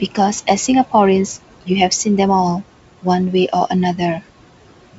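Speech recorded over a wideband link carries noise suppressor artifacts throughout. Room noise is cut by about 18 dB between phrases and swells back under speech, so the spectrogram shows a pumping, speckled noise floor. At 3.56 to 3.59 s, bit errors on an ADPCM link, at a low error rate, cause a short rough pop. The waveform shows a brief jagged level jump, and the spectrogram shows a vertical smear that points to a few corrupted frames.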